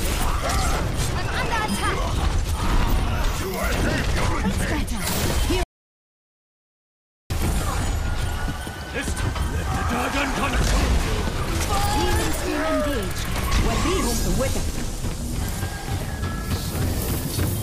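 The audio has one clear fault, an audio dropout to silence. At 5.63 s the sound cuts off mid-flow. It returns at 7.30 s. The gap lasts about 1.67 s. It is dead silence, with no room tone or noise floor underneath. Whatever happened in that stretch is gone. The likely cause is a lost input, such as a disconnected device, a failed link or a stray mute, while recording carried on writing silence.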